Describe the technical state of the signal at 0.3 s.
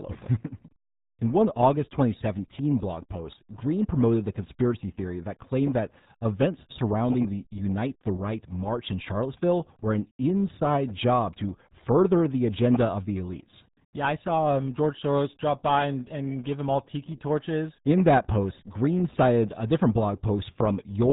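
At 0.3 s the speech carries RealAudio 14.4 codec damage, present from start to finish. The band stops at 3.8 kHz, and the heavy coding loss, which fits an 8 kbit/s stream, shows as a muffled, gargling texture. A low-rate speech coder built for dial-up modems discards everything above that limit and rebuilds the voice from a coarse model, so sibilants and upper harmonics are gone and the remaining tone sounds smeared and watery.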